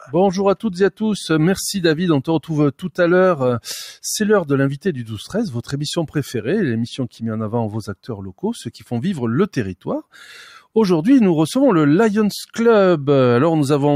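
The noise suppressor misjudged part of the audio as noise between 2.79 and 2.99 s, pulling it down by about 10 dB, so that stretch briefly sinks in level.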